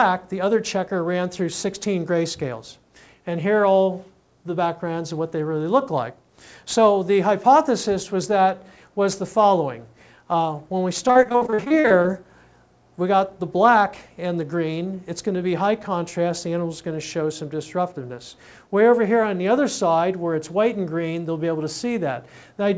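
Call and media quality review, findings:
Robotic, choppy sound 11.08 to 12.06 s. Repeated packet loss: short holes, longest about 51 ms, each patched by extending the previous sound, so roughly 37% of the stretch is concealed. Probable component: network/jitter buffer. The G.722 call path passes nothing above 8 kHz at 64 kbps.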